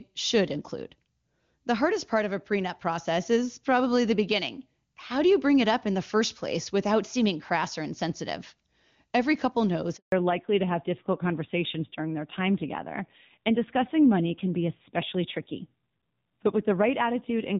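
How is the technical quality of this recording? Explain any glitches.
The call quality takes a clear hit at about the 10-second mark: a brief dropout, then the sound stays narrowband until the end.

At 9.96 s there's a handover gap. The call switches networks, no frames arrive for 160 ms, and the speech dies away and is silent until 10.12 s.

From 10.12 s on there's a fallback to narrowband. The link drops from HD Voice, likely to a low-rate AMR-NB mode around 7.4 kbit/s. Nothing remains above 4 kHz, so the speech sounds duller and rougher.

Before the switch, the wideband codec sounds clean and full, which fits a high-rate AMR-WB mode.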